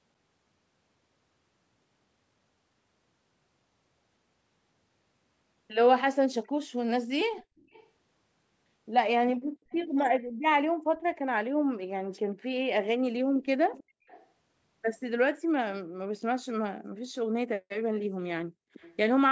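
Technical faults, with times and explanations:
7.37–7.88 s, 9.70–9.88 s, 13.73–13.84 s, 14.07–14.26 s and 18.80–18.96 s, echo leak: short, faint ghosts of the speech come back about 318 ms behind the original, sitting well under it, roughly 20 to 25 dB down. The one at 9.7 s is a touch louder. That steady delay likely means a far-end loudspeaker is feeding back into the microphone, with the echo canceller missing bits of it.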